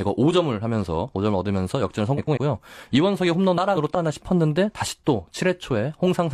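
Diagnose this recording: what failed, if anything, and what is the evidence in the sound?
Frames out of order at the network or decoder stage: adjacent frame runs were swapped, so 2.17–2.37 s and 3.57–3.96 s play with halves exchanged, as garbled flutter.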